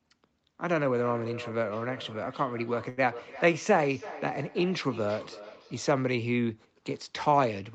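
From 0.92 to 6.14 s, each word returns about every third of a second, thinner and ringing, peaking about 15 dB below the speech: feedback echo between two devices, one microphone recapturing the other's playback. At 2.89 s a sound hangs for about 80 ms with a slight buzz or dip, then resumes without loss, a short stall from a late packet draining the jitter buffer.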